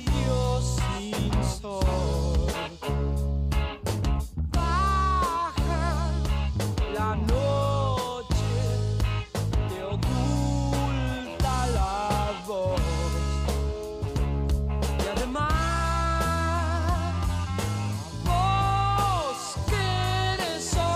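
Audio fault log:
Nothing to log here: no faults turned up anywhere in this clip.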